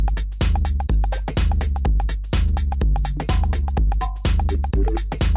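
Nothing stood out as a technical problem on listening to this audio.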